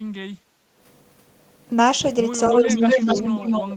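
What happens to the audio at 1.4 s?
Nothing goes wrong at 1.4 s; the speech carries on cleanly there with no dropout, click or distortion.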